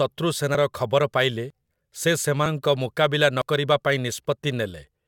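Brief skips at 1.50, 2.46 and 3.42 s each drop about 40 ms of speech, likely audio missing between chunks at one-second boundaries.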